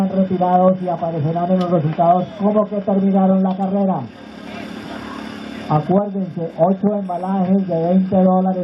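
Clock slip clicks run from 0.17 s to 8.57 s: faint, evenly spaced ticks about ten times a second, around a hundred in all. The likely cause is two devices running on separate, unsynchronised clocks that disagree by something like 200 ppm. Each time that drift builds up to a whole sample, a single sample is dropped or repeated, leaving a tiny discontinuity in the sound.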